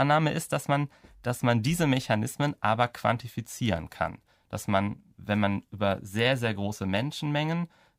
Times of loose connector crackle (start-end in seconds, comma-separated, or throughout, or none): 3.76-3.78